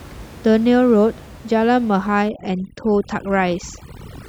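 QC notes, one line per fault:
2.29–4.29 s, overdone noise removal: from 2.29 s to the end, a noise reducer is working far too hard. It treats every frequency band that comes near its noise estimate as noise and cuts it deep or mutes it. The room noise, about 21 dB below the speech, drops and breaks up into twinkling specks. Quieter parts of the speech are removed along with it.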